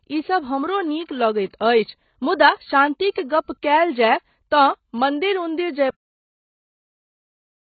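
AAC compression runs through the whole speech clip, and it is likely the cause of the dull, smeared sound. Nothing is present above 4.5 kHz, and the damage is heavy, which fits a low bitrate around 16 kbps. At that rate an AAC-LC encoder has too few bits for the full spectrum. It lowers the upper limit and codes what remains coarsely against its hearing model, so the top end is missing.

Pre-echo appears from 3.11 to 3.16 s, a spread of 48 ms ahead of a sharp attack. The transform codec spreads its quantisation noise across the whole block. The quiet stretch before the onset therefore picks up noise sized for the louder part that follows. It is heard as a brief hiss just before the attack, which loses some of its crispness.

A cut-off end occurs at 5.90 s. The sound stops in the middle of speech and drops straight to silence with no natural decay, and the silence continues to the end of the clip. 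This points to the final buffers never being written or played out, so the recording ends abruptly rather than fading or finishing its last sound.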